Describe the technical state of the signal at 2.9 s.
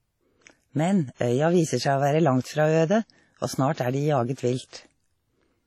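At 2.9 s the speech carries heavy transform-codec smearing throughout, likely WMA compression at a low rate around 32 kbps: washy, ringing, with breathing hiss. The spectrogram shows nothing above 13.7 kHz and patchy, blurred time-frequency blocks.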